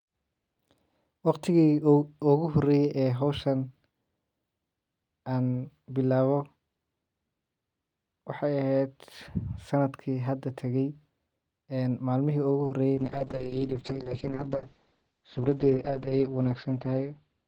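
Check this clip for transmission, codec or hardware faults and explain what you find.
Two kinds of fault show up, both late in the speech.

At 12.63 s and again at 12.67 s there is a short concealed packet loss, 20 ms and then 40 ms, heard as a brief smeared wobble. The audio never arrived in time, so the receiver extended the preceding sound and blended back into the real signal.

From 12.96 s to the end, a call bitrate drop makes the speech rough and muffled, with the top end cut from 20 kHz to 8 kHz. The connection's bandwidth estimate fell, so the encoder went from 64 kbps to 7 kbps, staying at its lowest for about 3.2 s.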